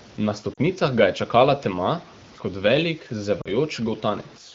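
From the start and through the whole speech clip runs a gritty, grainy distortion that tracks the signal, growing coarse on quiet passages and tails. This is most likely low bit depth without dither: the rounding error sits only about 25 dB below the signal and fits truncation to around 7 bits. On a waveform the quiet stretches show visible staircase steps, and a spectrogram shows a raised, signal-following noise floor smeared across the band rather than a steady hiss.

At 0.53 to 0.59 s, and again at 3.41 to 3.49 s, come lost AMR speech frames, each gap about 40 ms, fitting two consecutive frames. The wideband decoder, otherwise carrying the speech at 15.85 kbit/s with only light coding damage, fills each gap by repeating its last pitch and vocal tract settings at falling gain. Each gap is heard as a short dip toward near silence before the voice returns, weak or rough for a moment. A spectrogram shows frozen, repeated harmonic bands fading for a moment, and the waveform shows a brief envelope sag.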